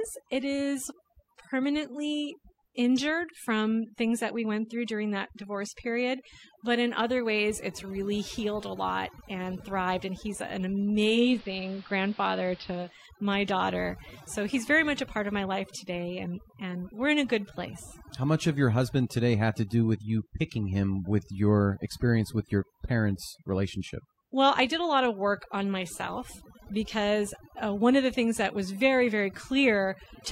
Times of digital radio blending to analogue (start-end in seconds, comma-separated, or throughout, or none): 11.03-13.06